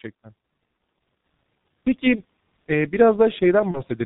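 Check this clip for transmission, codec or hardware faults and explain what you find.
Two faults affect this speech clip: heavy low-bitrate codec damage throughout, and two brief dropouts that the decoder patched over.

G.723.1 codec, throughout: the audio passes nothing above 4 kHz, and the slow-updating 30 ms voice model, which fits roughly 6 kbit/s, leaves speech muffled and hoarse, with smeared consonants.

VoIP packet loss concealed by the speech codec, at 2.15–2.22 s and 3.71–3.82 s: each gap fits a single lost 30 ms frame. The decoder extends its last pitch and filter at falling gain, so the sound turns briefly into a fading buzzy tone or coloured noise and recovers only slowly.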